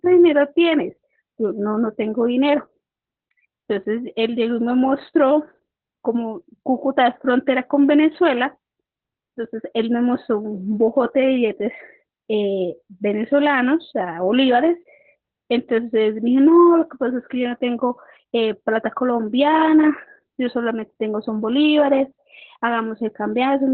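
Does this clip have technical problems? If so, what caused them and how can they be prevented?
Yes. Opus voice compression runs throughout the clip. The speech sounds muffled, hoarse and faintly robotic because the coder has dropped to narrowband SILK mode and codes the excitation coarsely, which points to a bitrate around 8 kbps. A spectrogram shows a hard ceiling at about 4.2 kHz, with smeared, blurry harmonics beneath it. To prevent this, encode at a higher Opus bitrate so the coder keeps wideband or fullband audio.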